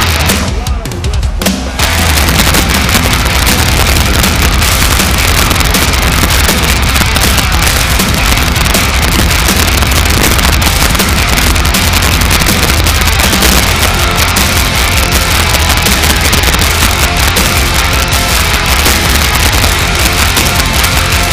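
Violent cracks burst out on the loudest peaks across the whole clip, far harsher than clipping. This is integer overflow: the level is driven about 8 dB too hot, and the few percent of samples exceeding the limit wrap to the opposite extreme instead of being held.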